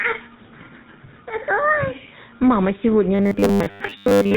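GSM full-rate codec, throughout: the speech has been through the original GSM speech coder, which models the vocal tract and excites it with a coarse, regularly spaced pulse train, discarding two of every three excitation samples. The damage is plainly audible as a buzzy, gravelly roughness on every voiced stretch, and nothing above 4 kHz survives, so sibilants and brightness are gone. The degree of coarseness fits the 13 kbps full-rate mode.

Robotic sound from repeated short buffers, from 3.15 s to the end: the speech turns into a rigid metallic buzz at a fixed 100 Hz that only loosely tracks the syllables. This is likely a playback path receiving audio too seldom and filling the gaps by looping the most recent short buffer, which fits a 10 ms buffer. Roughly two thirds or more of the real audio in this stretch is replaced by repeats.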